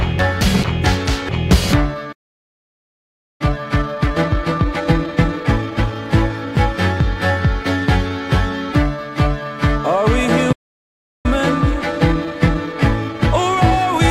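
At 2.12 s a playback stall begins, likely because the player ran short of buffered data or its output thread was held up. The sound cuts out mid-flow for about 1.27 s and resumes at 3.41 s. The player then runs a time-compressed catch-up until 5.95 s, trimming its backlog by splicing out small slices and cross-fading the joins. The audio runs about 1.5 times fast at unchanged pitch, audibly rushed. A second stall, from 10.52 s to 11.26 s, silences the output for about 0.72 s. A milder catch-up at about 1.1 times speed follows and runs to the end, slightly hurried.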